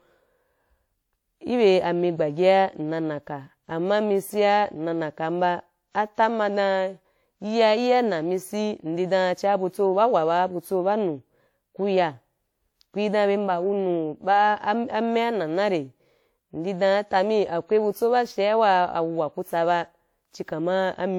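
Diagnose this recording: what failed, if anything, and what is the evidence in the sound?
The damage is at the codec stage, and it runs through the whole speech clip. The sound has a swirly, hollow quality, consonant onsets are smeared, and there's grainy noise that seems heavier than one pass at a decent rate would leave, though content still reaches about 20.1 kHz. That fits a 96 kbit/s WMA chain and points to generation loss, likely from around five decode-and-re-encode passes, each one re-quantising on a shifted frame grid so the holes and noise pile up.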